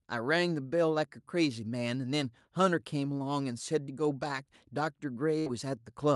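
At 5.39 to 5.48 s, a burst of packet loss: the receiver stretches and fades the last sound across 60 ms of lost audio, not a silent gap.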